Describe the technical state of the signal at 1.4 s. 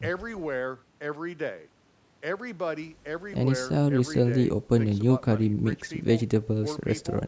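At 1.4 s the speech is intact, with no fault present, and the call microphone processing is working normally, keeping the band below 8 kHz and thinning only the lowest bass.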